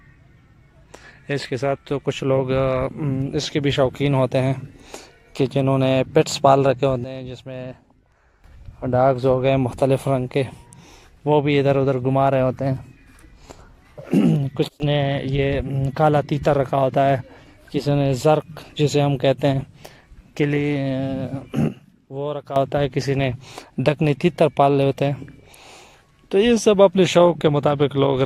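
A digital gain setting was most likely applied from one sample to the next without any ramp, a sudden gain jump that occurs three times in this audio. The sound and its background noise drop together by about 13 dB from 7.04 to 8.44 s, by about 22 dB for a brief stretch from 14.68 to 14.8 s, and by about 10 dB from 21.68 to 22.56 s, then snap back to the original level each time.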